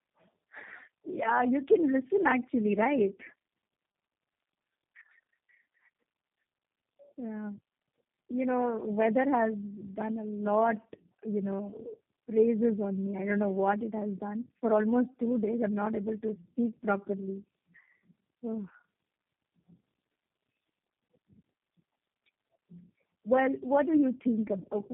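Tandem speech coding runs throughout: the speech was re-encoded repeatedly, fitting roughly three low-rate codecs in a row, leaving it rough, warbly and muffled, with nothing above 3.5 kHz.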